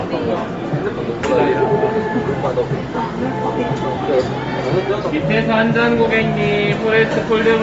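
A recording of everyday sounds, and the whole thing has a plainly audible coarse, grainy edge, with nothing at all above about 7.7 kHz. The top of the band isn't rolled off gently. It's sheared away, and what remains up high has that breathy, noise-filled texture you get when a codec zeroes spectral detail and fills it back in with noise. That points to Bluetooth LC3 compression as the likely cause, at a rate that fits roughly a 32 kbps stream with 10 ms frames.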